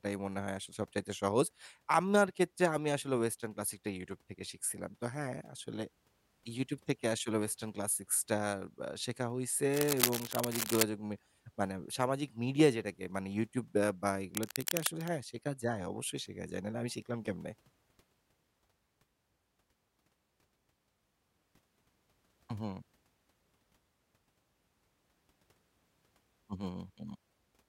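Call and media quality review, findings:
Cable scratch noise, 9.74–10.83 s and 14.18–15.09 s: dense, uneven scratching over the speech, first about as loud as the speech, second somewhat quieter. Likely a worn cable or connector being moved. Irregular noise bursts, unlike the evenly spaced clicks of digital errors.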